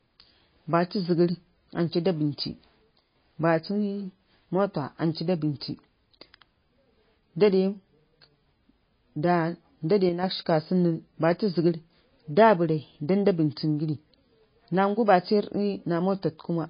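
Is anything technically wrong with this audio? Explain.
Yes. Two faults are audible.

The whole speech recording shows plainly audible damage that is likely from MP3 compression. Nothing is present above 5 kHz, so the voice sounds dull and band-limited. Because the encoder runs short of bits, it drops the treble at a fixed cut-off and zeroes quieter spectral lines, which then flicker on and off between frames. The result is a watery, swirly texture with smeared consonant onsets, consistent with a very low bitrate of around 24 kbps.

There are also two brief dips where one channel drops out, likely from a stereo channel briefly losing signal. The first runs from 2.98 to 3.16 s, and the second from 10.09 to 10.23 s. Each lasts under a fifth of a second. With only one channel feeding the mono sum, the level falls abruptly by about 6 dB and then recovers, which is heard as a short, sudden hollowing or drop in loudness.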